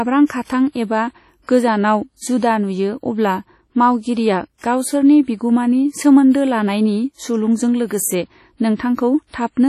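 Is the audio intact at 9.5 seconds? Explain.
No. At 9.5 seconds, as throughout the clip, the speech carries heavy damage that is likely WMA compression. A transform encoder with long blocks smears its quantisation noise across tens of milliseconds and zeroes weak spectral lines, which here sounds ringing and washy, with hiss that breathes with the speech and nothing above 14.7 kHz. That smearing, rather than crisp pre-echo or metallic swirl, separates it from MP3 damage and fits an early WMA encoder at about 32 kbps.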